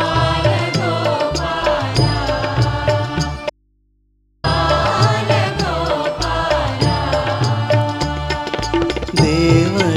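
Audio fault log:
3.50–4.44 s, audio dropout to a faint residue. The sound cuts off abruptly and returns just as suddenly about 0.94 s later. It does not fade or pause naturally. The gap is not silent. A low mains hum remains, roughly 45 dB below the normal level. The wanted signal was likely lost somewhere upstream while the rest of the path stayed live. The open input then picked up hum in place of the sound.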